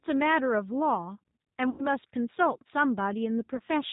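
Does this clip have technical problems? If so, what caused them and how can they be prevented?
Yes. Throughout the speech there is plainly audible G.729 codec damage: a slightly rough, synthetic quality, consistent with an 8 kbit/s codec that rebuilds each 10 ms frame from a vocal tract filter, a pitch estimate and a few pulses rather than the real waveform. On a spectrogram, energy stops sharply at 4 kHz with nothing above, and harmonics look smeared. Prevention: use a wideband codec such as G.722 or Opus where the network allows.

There are also two gaps where VoIP packet loss was concealed by the speech codec, at 1.70–1.86 s and 3.56–3.61 s. They fit about 90 ms and 30 ms of lost audio. Each likely corresponds to three packets and one packet of 30 ms. The decoder extended its last pitch and filter, so each gap is filled with stretched, fading sound, and the first one stays weak briefly after audio resumes. 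A spectrogram shows energy dimming across each gap, and the waveform shows a tapering envelope. Prevention: improve network reliability or add forward error correction and a well-sized jitter buffer.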